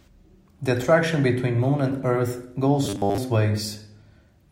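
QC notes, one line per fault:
2.85–3.18 s, robotic sound from repeated short buffers: for about a third of a second the speech collapses into a rigid, metallic buzz pitched at 100 Hz that only loosely tracks the syllables. The buzz period fits a 10 ms segment being looped; the likely cause is audio arriving too late, with playback refilling the gap by repeating the last short buffer, so most of the real signal in this span is skipped.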